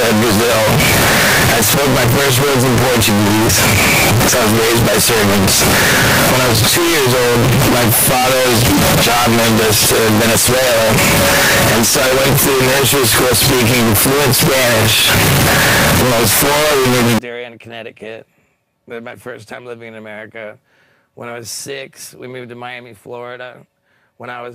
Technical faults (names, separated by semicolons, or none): signed and unsigned mixed up